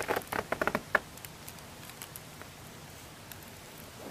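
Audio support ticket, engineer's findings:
Brief blip at 3.16 s: damaged data in a compressed stream. Corrupted bytes in the stream; the decoder misreads them, loses sync, and resumes at the next valid frame header.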